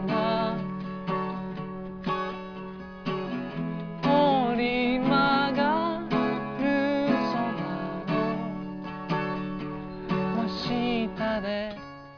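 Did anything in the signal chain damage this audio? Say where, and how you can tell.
No, nothing along the chain seems to have done any harm here; there's nothing to point to at any stage, so you can relax about this one.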